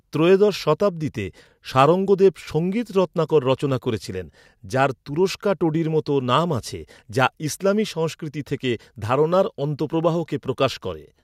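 No technical faults can be heard anywhere in this speech recording.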